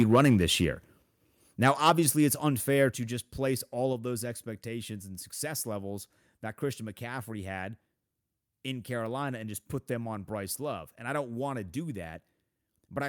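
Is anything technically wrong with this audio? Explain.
Yes. From 0.00 to 0.65 s and again from 1.62 to 2.09 s, microphone overload flattens the loudest peaks. The signal runs about 6 dB and then about 5 dB past full scale, and around two percent of samples are clipped. The likely cause is input gain set too high for the converter. The result is a harsh, crackling edge on those syllables.

Microphone volume stepped down occurs three times: at 1.02 s (about −5 dB), 1.9 s (about −3 dB) and 2.91 s (about −5 dB). Each is an abrupt level drop affecting voice and background together. This is likely automatic gain control reacting to the overloaded peaks.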